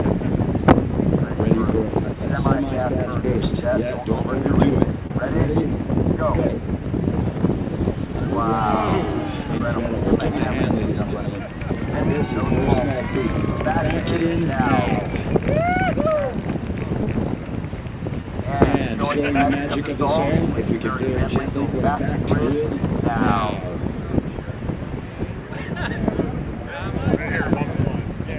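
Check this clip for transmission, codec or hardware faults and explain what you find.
Short concealed packet loss occurs seven times: 5.07–5.11 s, 6.48–6.50 s, 9.58–9.60 s, 17.03–17.07 s, 18.21–18.25 s, 21.95–21.97 s and 27.14–27.16 s. At each point, 10 to 30 ms of audio arrived too late. The receiver stretched the preceding sound across the gap and then blended back, so each spot is a brief smear or wobble. An unconcealed dropout would leave a hard silent hole with clicks at its edges.

Nothing is heard above 4 kHz. That narrow band, with its coding noise, points to a 64 kbps G.711 mu-law call path.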